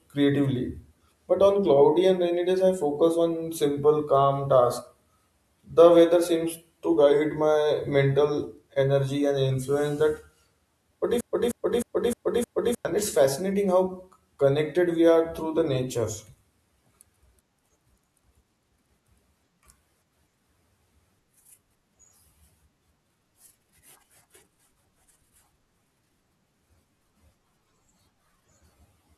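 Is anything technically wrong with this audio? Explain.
Yes. A broken-record loop runs from 11.21 to 12.85 s: a 0.31 s fragment repeats five times, likely from a stalled stream resending its last buffer, before "it's fascinating".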